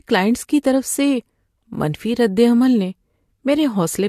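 A short speech clip with a dull top end and a mix of codec artefacts from start to finish, with nothing audible above 14 kHz. The mixed character of the artefacts points to transcoding between lossy codecs, likely a Vorbis encode at around 66 kbit/s later re-encoded to AAC-LC at about 64 kbit/s. The second encoder wastes bits reproducing the first one's artefacts and adds its own, while the 14 kHz ceiling carries through the chain.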